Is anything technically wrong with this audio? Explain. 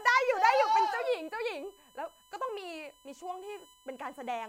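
Yes, there's USB whine under the speech the whole way through: a steady 1 kHz tone with harmonics, loudest at 3 kHz, about 30 dB down, from the bus's 1 ms frame current leaking through power or ground.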